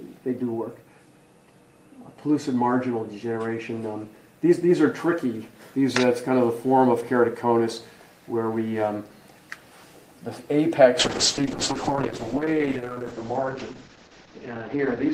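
From 11.01 s to the end, about 4.1 s, a call bitrate drop holds. Starved of bits, the encoder codes coarsely and cuts the top end from 20 kHz to 8 kHz. The sound turns muffled and rough, which fits a fall from 32 to 8 kbps.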